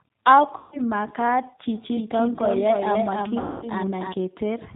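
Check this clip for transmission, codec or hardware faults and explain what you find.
Three faults are present: low-bitrate codec coding throughout, two concealed packet-loss gaps, and a doubled track in the middle of the clip.

Throughout, G.729 coding at 8 kbit/s is plainly audible. The speech is rebuilt from a filter and sparse pulses, so it sounds rough and synthetic, with nothing above 4 kHz.

From 0.58 to 0.81 s and from 3.40 to 3.69 s, VoIP packet loss concealed by the speech codec stretches the sound into a fading buzzy tone or coloured noise. About 140 ms and 220 ms are lost, consistent with seven and eleven 20 ms packets.

From 1.75 to 4.13 s, a doubled audio track adds a dry, full-band copy about a third of a second late and about 5 dB quieter, starting and stopping abruptly. The cause is likely a second, slower capture path.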